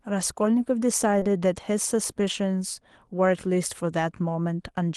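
At 1.19 to 1.23 s and again at 1.23 to 1.27 s, short concealed packet loss: about 20 ms each went missing, and the decoder extrapolated the preceding sound, leaving a brief smear.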